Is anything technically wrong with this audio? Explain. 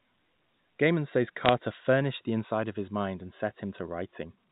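Yes. The speech passes through a telephone channel, band-limited to 4 kHz, which fits 64 kbps G.711 A-law coding, and one short burst of damage sits on top of it.

Bit errors on a digital phone line occur from 1.46 to 1.49 s, just before "furnished the inside of". A few bits per thousand were flipped in the 8-bit logarithmic codes, and each error changes a single sample. The result is brief crackle over intact speech. On the waveform these show as isolated one-sample spikes; on the spectrogram they appear as thin vertical lines spanning the whole band.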